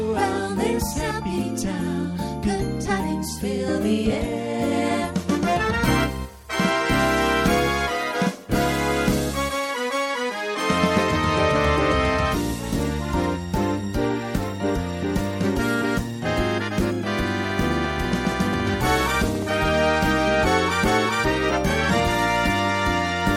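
From 17.50 to 19.43 s, a regular ticking of about 30 clicks at 14.6 per second sits roughly 5 dB above the sound: a train of clicks, likely from electrical interference.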